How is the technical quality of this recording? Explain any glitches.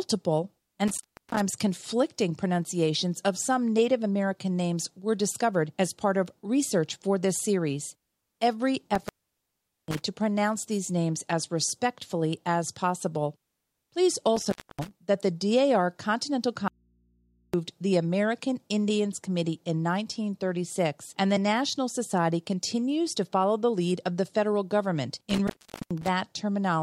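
The recording has two kinds of fault: four intermittent-contact breaks and one dropout to a faint residue.

Intermittent contact occurs at 0.88–1.40 s, before "conflicting pronunciations of some"; at 8.95–10.02 s, before "to pronounce these names"; at 14.36–14.91 s, before "that the"; and at 25.30–26.08 s. A loose plug or cable briefly opens the circuit, so the speech cuts out with crackle at each edge. The line stays open for about 310 ms, 790 ms, 270 ms and 430 ms respectively, with faint hiss in between.

The audio dropout to a faint residue runs from 16.68 to 17.54 s, a gap of about 0.86 s. The speech stops abruptly and then returns, with no fade. During the gap only hum remains, about 40 dB below the speech level. This is likely an open input: the wanted signal was lost, but the downstream path stayed live and picked up mains hum.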